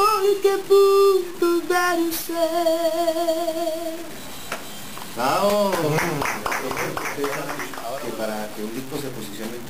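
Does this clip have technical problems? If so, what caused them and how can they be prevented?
Yes. Low bit depth without dither runs through the whole clip: a grainy, buzzing distortion clings to the sound and changes character as it moves, roughening quiet passages and making the softest moments sputter or drop out. The likely cause is truncation to about 5 bits with no dither, so each sample snaps down to one of very few steps and the error, roughly 20 dB below the signal, tracks the audio instead of staying as steady hiss. To prevent it, keep a higher working bit depth and add dither before any reduction.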